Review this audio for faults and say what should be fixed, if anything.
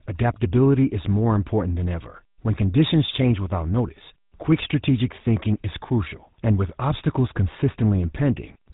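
Throughout the speech, voices carry a plainly audible buzzy, gravelly roughness, and the sound is dull, with nothing above about 3.8 kHz. This is GSM full-rate codec damage. The codec rebuilds speech from a vocal-tract model driven by a coarse, regularly spaced pulse excitation, discarding most excitation detail. That gives the grainy buzz, and the narrow band cuts off the upper range. The character fits the 13 kbps full-rate mode. To prevent it, capture or transmit through a wideband codec at a higher bitrate instead of a GSM full-rate path.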